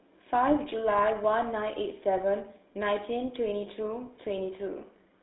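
From start to finish the speech has passed through a GSM full-rate codec, the original mobile-phone coder, at a rate that fits its 13 kbps mode. It rebuilds the voice from a vocal-tract model excited by a sparse, regularly spaced pulse train, so the excitation detail is thrown away. The result is a plainly audible buzzy, gravelly roughness, squeezed into a telephone band of roughly 250 Hz to 3.7 kHz with nothing above 3.9 kHz.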